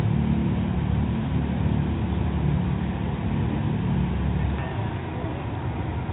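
No technical fault can be heard anywhere in this audio. There is nothing here that needs a time or a cause attached to it.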